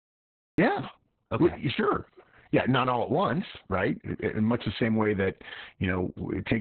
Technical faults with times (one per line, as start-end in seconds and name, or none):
0.00-6.60 Opus voice compression
0.00-0.58 cut-off start